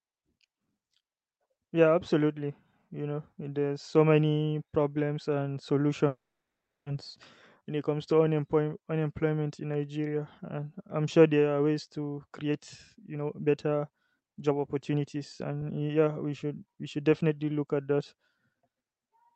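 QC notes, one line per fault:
6.07–6.89 s, call audio freeze: right after "so many problems and", the sound stalls for about 0.8 s. A brief decaying continuation of the last sound trails into roughly 0.7 s of silence, and then the speech picks up exactly where it stopped, with nothing missing. The likely cause is delayed packets draining the jitter buffer while the receiver filled the wait. The pause pushes everything after it about 0.8 s later.
12.31–12.60 s and 13.01–17.31 s, jitter buffer speed-up: after "there are ways to", the speech runs at 128% speed for about 0.3 s. It then runs at 116% for about 4.3 s, ending just before "look at that". Pitch stays unchanged while the pace sounds hurried. The receiver was trimming pitch-period-sized slices to shrink the excess delay, removing about a tenth of a second in the first stretch and around 0.7 s in the second.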